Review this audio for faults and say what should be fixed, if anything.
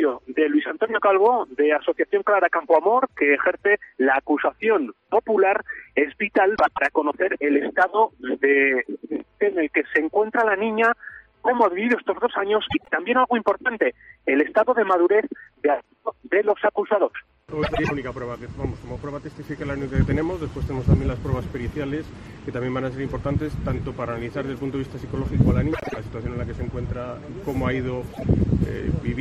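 Frames out of order at 6.55–6.79, 12.69–12.91, 17.63–17.91, 25.73–25.97 and 28.13–28.24 s: adjacent blocks of 26 to 105 ms play swapped, giving a garbled flutter. Unlike a dropout, no time is lost. Reorder packets by sequence number before decoding.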